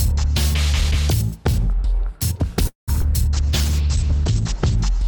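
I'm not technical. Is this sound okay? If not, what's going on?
No. From 2.67 to 2.90 s there is a call audio freeze. The sound stretches into a fading buzz, then goes silent briefly, likely because data arrived late.

At 3.02 to 3.05 s, short concealed packet loss causes a tiny smear. A moment of sound went missing and was patched over.

From 3.34 to 4.84 s, a call bitrate drop makes the sound rough and muffled. The connection squeezed it hard and cut off the top above 8 kHz.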